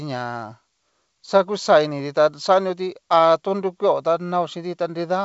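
Nothing stood out on listening to this speech clip, which comes through a G.722 wideband telephone path at 56 kbit/s.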